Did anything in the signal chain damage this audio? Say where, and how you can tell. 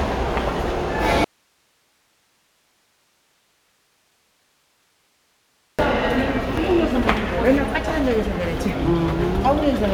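Yes. An audio dropout to a faint residue runs from 1.24 s to 5.79 s: for about 4.54 s the sound cuts abruptly to hiss roughly 45 dB down, then returns mid-flow. A live path feeding only noise likely points to an intermittent analogue connection.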